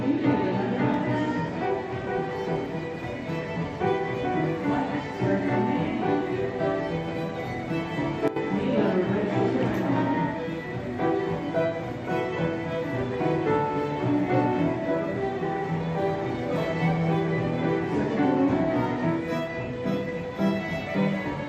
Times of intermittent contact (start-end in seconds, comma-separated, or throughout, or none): none